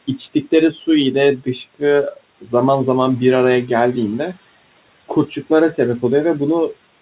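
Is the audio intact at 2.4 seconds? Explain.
No. From 2.41 to 2.53 s, speech cut by the noise suppressor dips the sound about 11 dB, so it sounds swallowed. The waveform sags briefly and the spectrogram fades.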